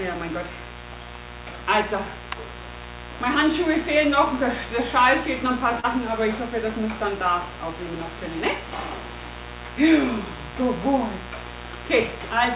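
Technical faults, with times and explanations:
Throughout: mains buzz at 60 Hz, about 15 dB below the sound itself, a steady raspy hum from switching spikes that leak in twice per mains cycle. A spectrogram shows evenly spaced horizontal harmonic lines stacked up to the 4 kHz ceiling of the narrowband call path.
5.80–5.85 s: short concealed packet loss. About 40 ms of audio never arrived, and the receiver bridged roughly 34 ms of it by extending the preceding sound before blending back. This gives a brief smear or wobble. The spectrogram shows a smoothed, stretched patch, and the waveform a slightly too-regular stretch.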